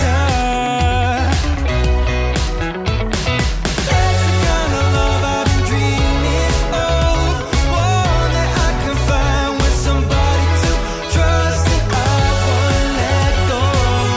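No technical faults can be heard anywhere in the audio; the signal holds steady throughout with nothing that points to a problem in how it was captured, processed or delivered.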